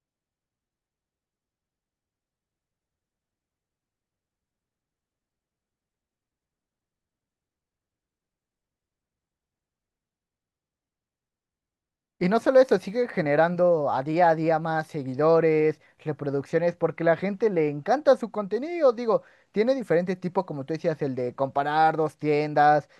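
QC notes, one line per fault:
No faults were found in the speech recording. Nothing in it needs a timed entry.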